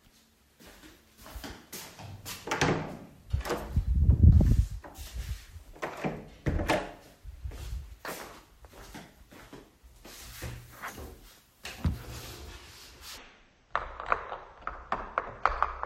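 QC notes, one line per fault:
13.18–15.86 s, section at the wrong speed: the sound runs at half speed, dropping roughly ten semitones and dragging, likely from playback against the wrong clock.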